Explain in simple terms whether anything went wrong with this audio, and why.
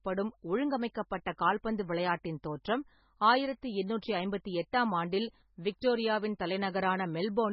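Throughout the speech, the sound is dull and very watery, with nothing above about 5.6 kHz, so s sounds lose their crispness and swirl. This is MP3 compression, likely at a very low quality setting, where the encoder discards the treble and faint detail to save space.

At 4.01 s and again at 5.81 s, a brief hiss of about 11 to 12 ms comes just before a sharp sound, which then lands soft and smeared. This is pre-echo: the codec spreads its noise across a whole chunk of audio, so it leaks into the quiet moment before the attack.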